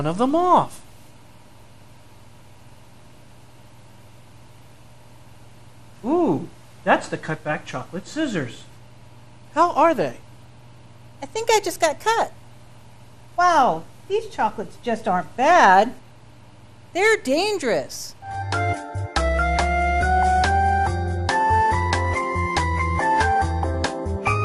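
All the way through, the audio sounds dull and gurgly, with granular grit and flickering highs, likely MP2 compression starved of bits, which fits roughly 80 kbps.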